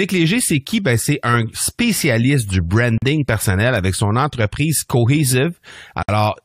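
Separately encoded pieces were joined without trimming encoder delay and padding, causing gaps at a join of encoded pieces: 42 ms silence at 2.98–3.02 s, between "c'est un spécialiste du" and "personnel avec son entreprise", and 57 ms at 6.03–6.09 s. The speech drops out abruptly with smeared edges, then resumes where it stopped.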